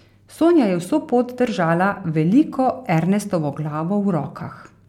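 No technical faults can be heard anywhere in the recording.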